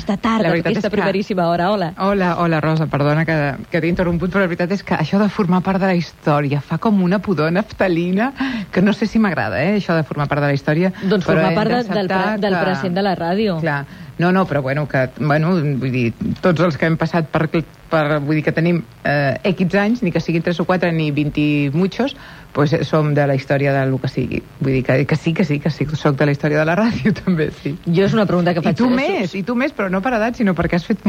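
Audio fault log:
No faults detected; nothing to log.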